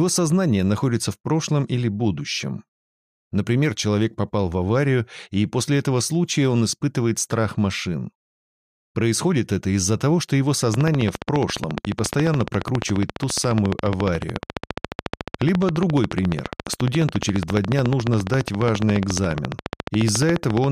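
From 10.74 s to 20.65 s, a regular train of clicks, about 14 per second, ticks well above the sound, likely interference or a faulty connection.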